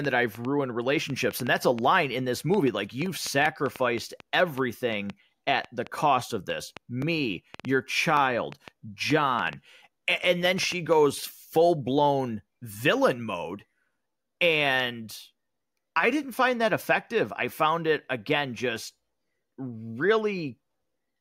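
From 0.05 s to 10.94 s, just before "full blown villain mode", a train of clicks runs over the speech, around forty at about 3.6 per second and unevenly spaced, some roughly 10 dB above the signal, likely interference from nearby equipment.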